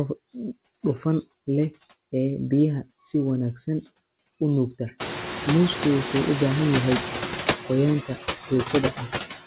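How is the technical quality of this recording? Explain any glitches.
The quality is limited by one fault running through the whole recording: noise suppressor artifacts.

A noise suppressor is working frame by frame to pull steady noise down by about 12 dB. Around 5 s the room noise jumps by about 25 dB to sit only about 8 dB below the speech, and the suppressor visibly pumps: the noise drops away in the pauses and swells back under each phrase. Nothing is heard above 4 kHz, which points to a narrowband telephone codec such as G.711.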